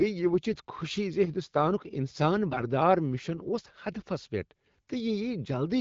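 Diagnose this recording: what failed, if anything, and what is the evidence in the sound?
AMR bit errors at 0.52 to 0.61 s, just before "خوشی ز ہنٛدستانک انسان", and 2.50 to 2.64 s, just after it. Speech turns hoarse and gargly while pitch and level hold. A weak network link flipped roughly one in twenty unprotected bits, misplacing excitation pulses and skewing fine gain and spectral values.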